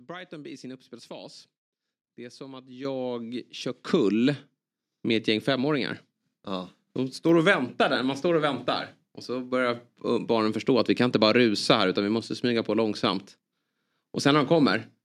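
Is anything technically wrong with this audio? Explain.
Yes. At 2.85 s and again at 3.87 s there's a microphone volume stepped up fault: the call software boosted the input gain, by about 10 dB then about 6 dB, so the speech and background jump louder together.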